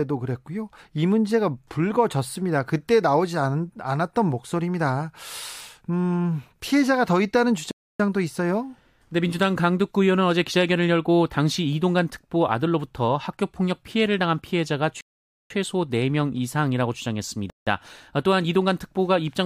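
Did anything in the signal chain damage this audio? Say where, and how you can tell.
Yes, three rebuffering stalls at playback, at 7.71–8.00 s, 15.01–15.50 s and 17.50–17.67 s. The speech falls silent for about 0.28, 0.5 and 0.17 s, then resumes exactly where it stopped. Unlike a packet-loss dropout, nothing is missing; the player simply starved and waited.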